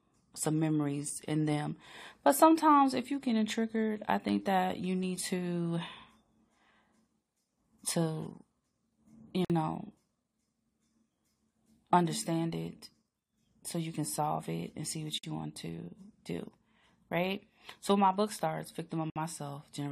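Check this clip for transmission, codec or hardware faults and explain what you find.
The speech has three gaps at joins of encoded pieces. They fall at 9.45 to 9.50 s (51 ms), at 15.18 to 15.23 s between "it and see what" and "you want to do" (53 ms), and at 19.10 to 19.16 s after "so my book starts" (58 ms). Separately encoded segments were spliced untrimmed, leaving encoder start delay and last-frame padding in place. Each join opens a brief, smeared silence before the speech resumes where it stopped.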